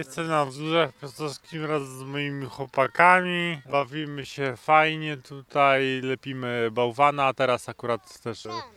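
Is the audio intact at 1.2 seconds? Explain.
No. At 1.2 seconds the audio sits inside a time-stretched section running from 0.0 to 6.12 s. Software likely stretched this stretch to fill a longer duration, playing it at about 0.61 times its original pace while holding pitch steady by repeating short slices of the waveform. The result is slowed, drawn-out sound at unchanged pitch, before the pace jumps back to normal after 6.12 s.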